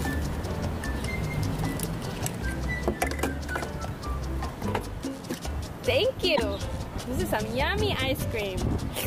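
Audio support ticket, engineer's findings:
Damaged data in a compressed stream, 6.33 to 6.40 s: short chirp, squawk, click or hole of about 80 ms. Probable component: decoder input. Corrupted bytes make the decoder misread or reject frames there, lose sync, then resume output at the next valid frame header.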